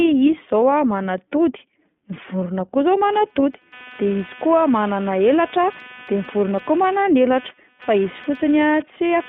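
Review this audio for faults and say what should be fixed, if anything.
The speech has the iLBC codec sound throughout, limited to about 150 Hz to 3.5 kHz, with a rough, synthetic edge from independently coded frames. This fits 20 ms frames, and it differs from generic band-limiting by that frame-rate grain.

Computer activity noise starts at 3.13 s and runs to the end. It is a buzz of a few hundred pulses per second, about 20 dB below the speech, riding on the shared ground. Unlike mains hum, it follows computer load rather than holding steady.

To prevent both, use a wideband codec and feed the audio through an isolated or USB-separate interface away from the computer's ground.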